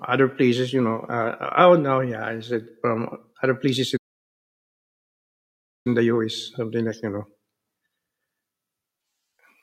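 At 3.96 s, just after "other places", the speech cuts out in mid-flow for about 1.9 s until 5.87 s: a playback stall, likely the player starving for data or a blocked thread. The waveform shows a flat silent gap; the spectrogram, a blank vertical band.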